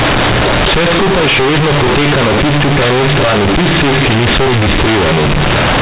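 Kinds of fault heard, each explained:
Companded audio read as linear: The speech is stored as mu-law bytes, the logarithmic G.711 telephone format, but it plays back as plain linear 8-bit samples without expansion. The byte values no longer map to their true levels. Every change of sign throws the output across about half its range. Quiet passages come out as large as loud ones. Through the whole clip this gives harsh, very loud, buzzy distortion, with heavy noise filling the pauses.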